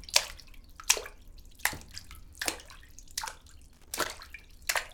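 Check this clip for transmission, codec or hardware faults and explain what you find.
One hardware fault is present: loose connector crackle from 3.73 to 4.07 s. A worn or dirty contact repeatedly makes and breaks, chopping the signal, with pops from any DC on the line. The result is an irregular scratchy burst. Unlike evenly spaced digital clicks or clean dropouts, its timing is ragged.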